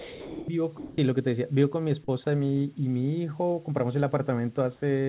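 Sound dropped by the voice detector, from 0.00 to 0.48 s: the opening speech gives way to a steady, featureless hiss, and about 0.4 s of real sound is lost before the speech comes through. The likely cause is the sender's voice detector misjudging the start of speech as background and withholding it, so the receiver filled the gap with synthetic noise until the detector triggered and normal transmission resumed.

Comfort noise in place of the background, from 0.78 to 0.98 s: during a 200 ms pause, the real background, which sits about 27 dB below the loudest speech, is replaced by a smooth, even noise about 3 dB different in level, with its texture gone. This likely comes from discontinuous transmission, where the sender goes quiet when no speech is detected and the receiver synthesises a rough stand-in. The narrow, telephone-like band, with nothing above 4 kHz, fits a G.711 A-law call path.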